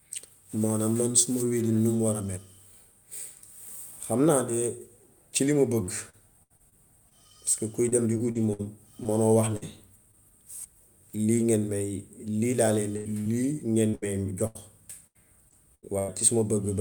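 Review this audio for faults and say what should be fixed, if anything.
Repeated packet loss (robotic sound) occurs in three stretches: 5.83–7.13 s, 7.89–10.15 s and 13.89–16.10 s. The receiver kept patching holes of up to 70, 59 and 92 ms by extending the previous sound, covering about 16%, 11% and 21% of each stretch. The result is choppy, with pieces missing. On a spectrogram, harmonics freeze into flat smeared bands between natural segments.

A burst of packet loss runs from 12.97 to 13.07 s. About 80 ms never arrived, and the receiver stretched the last sound and faded it down before the audio resumes with that piece gone. The spectrogram shows a horizontal streak ending in a jump.

Short concealed packet loss appears at 13.21–13.27 s. Roughly 40 ms was filled by continuing the preceding sound, then blended back, giving a brief smear or wobble. On a spectrogram it shows as a narrow blurred slice where onsets and fine detail briefly disappear.

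To prevent these faults, carry the audio over a steadier network path with a larger, adaptive jitter buffer and enable forward error correction or redundancy so lost packets can be rebuilt.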